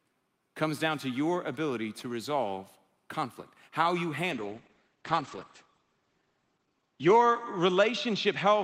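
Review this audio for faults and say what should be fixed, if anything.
A call bitrate drop begins at 4.32 s, after "resolve conflict how you," and lasts to the end. The speech turns coarse and muffled, and the bandwidth falls from 20 kHz to 8 kHz. This fits the encoder being pushed from around 40 kbps to about 9 kbps. On a spectrogram, the energy above 8 kHz vanishes abruptly. To prevent it, give the connection more headroom or smooth the bandwidth estimator so the encoder bitrate steps down gradually.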